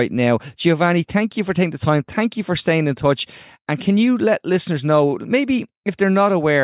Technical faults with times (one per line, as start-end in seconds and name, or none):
none